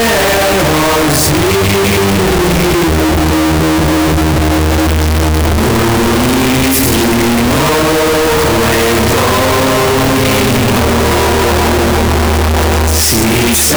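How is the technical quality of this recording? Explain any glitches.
The technical quality is very poor, with one fault present for the whole recording.

From start to finish the audio is extremely loud and harsh, with a nearly square waveform sitting at an almost fixed, high level. This is likely a float read as integer fault, with 32-bit float samples interpreted as 32-bit integers, so each sample's sign and exponent bits decide the level instead of the true amplitude. Unlike ordinary clipping, quiet passages and background noise come out just as loud as the main sound.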